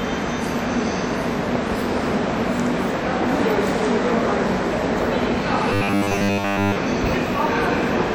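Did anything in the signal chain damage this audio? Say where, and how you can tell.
Yes, at the driver or buffer stage. From 5.73 to 6.76 s the sound turns into robotic sound from repeated short buffers: a rigid, metallic buzz at 100 Hz. That's likely a 10 ms chunk looping over and over while fresh audio arrived too late.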